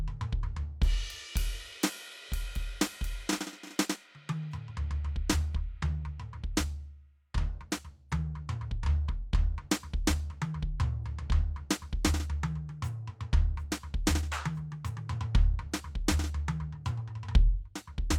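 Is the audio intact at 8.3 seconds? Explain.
Yes, the music plays through 8.3 seconds intact, with no dropout, click, distortion or other fault at that moment.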